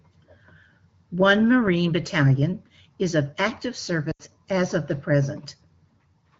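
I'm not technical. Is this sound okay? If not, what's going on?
No. Around 4.11 to 4.22 s, between "is of active" and "as of the", the speech briefly drops to near silence, then returns rough for a moment. These are lost AMR speech frames: the phone-call decoder guessed the missing bits from the last good sound, turning it down as it went.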